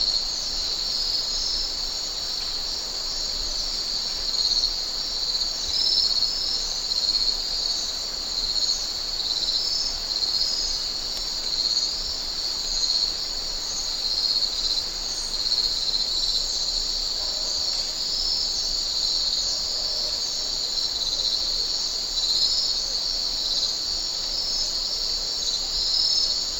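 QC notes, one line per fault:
14.56 s, dropped samples: a single sharp click, seen as a thin vertical line running the full height of the spectrum. The likely cause is a tiny gap in the sample stream, only a fraction of a millisecond, so the waveform leaps straight from one value to a later one. That step discontinuity carries energy at every frequency at once, which is why it is heard as a click rather than as any missing sound.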